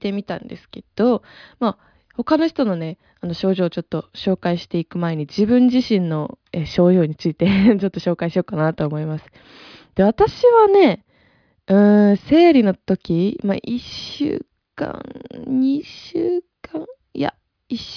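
Nothing goes wrong anywhere in this speech recording, so there's no technical fault to point to at any moment.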